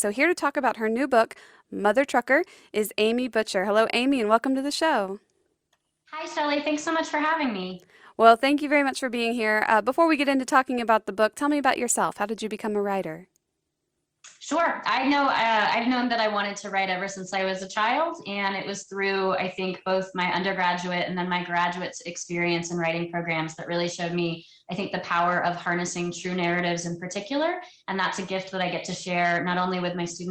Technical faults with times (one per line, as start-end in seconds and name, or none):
none